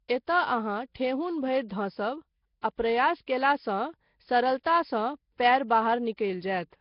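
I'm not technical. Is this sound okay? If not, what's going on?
No. All the way through, the speech sounds rough, hissy and a bit underwater, with nothing above about 5.3 kHz, most likely from Nellymoser compression, the old Flash microphone codec.

There's also pre-echo, a short hiss just before sharp sounds, at 2.61 s (just before "आ प्रयास"), 3.26 s (just after it), 4.63 to 4.65 s, 5.38 to 5.40 s and 6.17 s.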